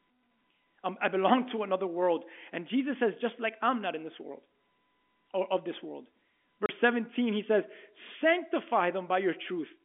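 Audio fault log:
6.66–6.69 s, packet loss filled with silence: just after "or of this world", a 30 ms gap cuts the speech, consistent with one lost 30 ms packet. The receiver played silence in its place, so the hole has hard edges against the narrowband G.711 telephone sound.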